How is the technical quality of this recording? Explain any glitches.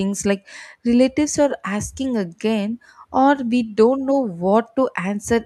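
The technical quality is good, and there are no glitches to explain.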